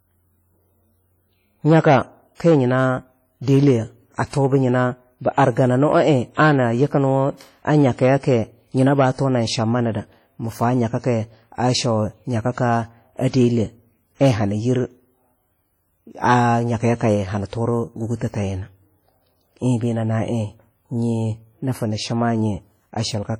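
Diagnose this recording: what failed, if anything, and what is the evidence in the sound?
The codec stage failed: throughout the speech there is heavy ringing, washy smearing and a hiss that breathes with the voice, likely from WMA compression at a rate that fits about 32 kbps. Content reaches 20.1 kHz, so this is long-block transform noise spreading in time, not band-limiting.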